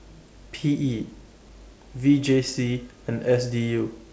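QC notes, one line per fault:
Nothing to flag here: the speech comes over the G.722 call path with nothing above 8 kHz, as that codec normally gives, and the room noise sits about 40 dB below the speech.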